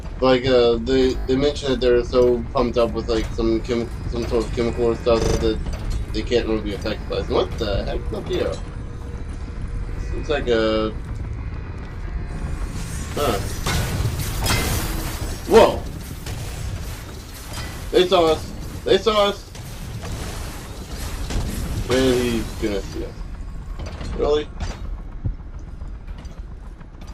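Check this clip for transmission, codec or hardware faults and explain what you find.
The clip contains three bursts of repeated frames: stretches of compressed audio were decoded more than once. Each repeat plays the same fragment again, so the sound briefly stutters.

From 1.17 to 1.25 s, a 20 ms block plays four extra times, adding 80 ms. From 5.21 to 5.38 s, a 40 ms block, which fits two 20 ms frames, also repeats four extra times, adding 160 ms. From 21.53 to 21.57 s, a 40 ms block plays once more, adding 40 ms.

On a waveform these stretches show identical copies placed end to end. On a spectrogram they appear as a short pattern tiled side by side.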